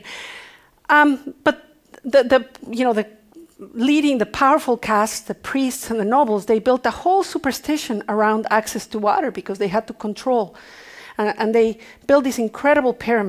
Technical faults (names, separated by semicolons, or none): none